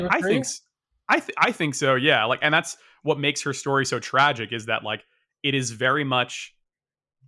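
Nothing in the recording stands out as a technical fault; the speech carries on without any glitch or interruption worth pointing to.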